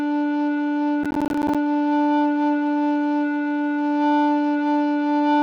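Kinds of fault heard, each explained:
Processor overload crackle: From about 1.04 to 1.55 s the music breaks into a gritty crackle as the processor repeatedly fails to deliver its small audio blocks in time. Each missed block becomes a brief hard-edged silence, each roughly 10 ms long, which fits a buffer of about that size, with about 15 misses in this stretch. A single dropout would be one clean gap, and clipping would stay tied to loud peaks.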